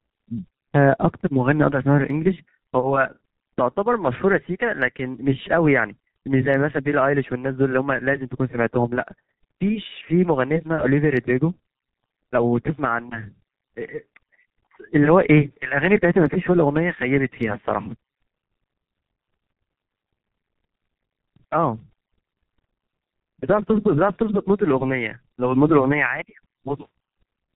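From start to end the speech carries the signature of the G.723.1 codec, heavily degraded. Nothing comes through above 4 kHz, so the sound is dull and muffled, and the coarse voice model, updated only once per 30 ms frame, gives a hoarse, buzzy texture and smears consonants together. The thinness of detail fits the codec's 6.3 kbit/s mode, where too few bits remain to describe fine spectral or timing detail.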